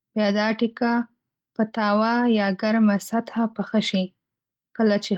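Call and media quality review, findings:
Nothing stood out on listening to this speech clip, which came through the Opus voice path with only the light coding character expected at around 24 kbps.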